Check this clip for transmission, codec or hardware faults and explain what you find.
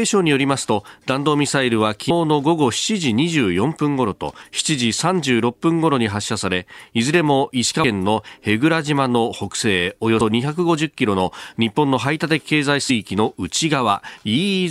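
Five short bursts of damaged data in a compressed stream interrupt the speech, at 2.09, 4.41, 7.83, 10.20 and 12.89 s. At each point, corrupted bytes make the decoder misread frames and hunt for the next frame header. The result is a brief chirp or blip, seen as a thin broadband vertical streak on a spectrogram and a sudden spiky glitch in the waveform.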